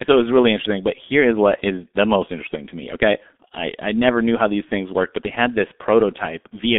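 Throughout, the speech carries G.723.1 codec damage: band-limited to about 200 Hz–3.6 kHz, heavily muffled and hoarse with smeared consonants, consistent with roughly 6 kbit/s coding.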